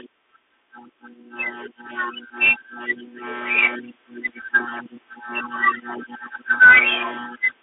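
Throughout the speech, the Bluetooth CVSD headset codec limits the band to roughly 300 Hz to 3.5 kHz, with nothing above 3.8 kHz, which fits a 64 kbps one-bit delta stream. Its adaptive step lags loud high content, so sibilants turn scratchy over a granular hiss.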